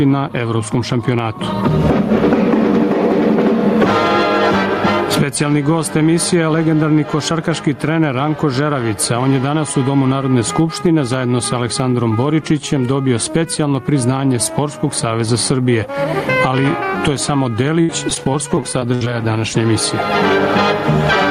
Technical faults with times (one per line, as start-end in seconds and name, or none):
0.00-21.30 gain pumping
17.81-19.07 repeated packet loss (robotic sound)